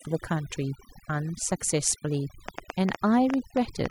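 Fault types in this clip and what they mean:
Overdone noise removal: A noise reduction process has been pushed far too hard on this speech. It pulls individual frequency bands down or out whenever they sit close to what it takes for noise. Quiet parts of the voice get removed along with the noise. The gaps between phrases drop to near silence, dotted with small twinkling specks. This lasts the whole clip.
Train of clicks: From 2.49 s until the clip ends at 3.90 s, a run of sharp clicks sits on top of the speech. There are about ten of them, arriving at roughly 6.9 per second with uneven spacing. They share a similar shape and stand well above the level of the voice. They are heard as ticking or popping, even in the pauses. The likely cause is electrical interference or a faulty connection or power supply.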